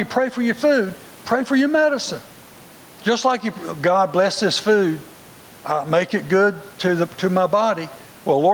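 Throughout the speech, loud and soft parts sit closer in level, a gain swing of around 10 dB that leaves the delivery squashed. This gain pumping is likely from input gain set far too high, with a fast limiter clamping down on peaks. The room noise sits about 35 dB below the speech.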